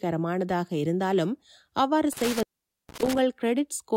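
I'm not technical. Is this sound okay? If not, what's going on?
No, there's a hiccup. Between about 2.13 and 3.19 seconds the speech has an intermittent contact problem. Somewhere in the chain a cable or plug isn't seated firmly, so the connection briefly breaks. For roughly half a second the speech drops out, with crackly clicks where it cuts and comes back, and faint hiss in between. Wiggling or reseating the connectors and recording again should fix it.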